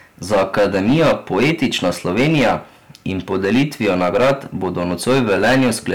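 Hard clipping runs through the whole of this speech clip: the signal is driven about 15 dB past what some stage in the chain can pass, so every peak that exceeds the limit is sliced off flat, and roughly 7 percent of the samples sit pinned at that ceiling. Those squared-off tops generate harmonics well up the spectrum, so the voice carries a harsh, buzzy fuzz on each louder syllable rather than occasional crackle.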